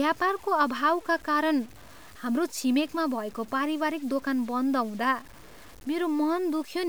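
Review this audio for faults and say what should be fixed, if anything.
The speech was likely reduced to very few bits with plain truncation and no dither, a grain that fits a word length of about 7 bits. This is low bit depth without dither: every sample snaps to a coarse step, so the error tracks the waveform instead of spreading as steady hiss. Across the whole clip this is heard as rough, signal-following distortion sitting roughly 25 dB below the speech, harshest on quiet syllables and decaying tails, which crackle or sputter rather than fade smoothly.

To prevent it, keep at least 16 bits through the chain and apply dither whenever word length is reduced.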